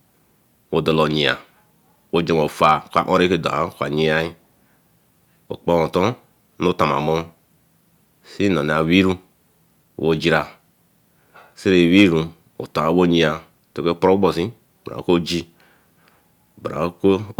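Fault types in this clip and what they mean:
Hard clipping: at 1.28–1.31 s, 2.64–3.22 s (just after "wey jonwe") and 11.97–12.04 s, the speech peaks go beyond what a stage in the chain can pass, by about 2 to 3 dB, so their tops are sliced flat. Those squared-off peaks add harmonics high in the spectrum, heard as brief crackle on the short bursts and as crackle on the peaks across the half-second event after "wey jonwe".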